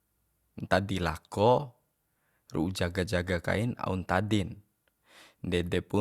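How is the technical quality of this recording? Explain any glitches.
The technical quality of the recording holds up, with no glitches to explain.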